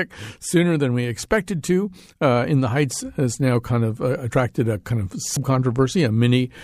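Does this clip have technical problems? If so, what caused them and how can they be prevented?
Yes. At 5.37 s the speech jumps forward: compressed frames skipped, roughly one 92.9 ms frame dropped as missing or damaged. Preventing it means checking file integrity and using error-resilient transfer.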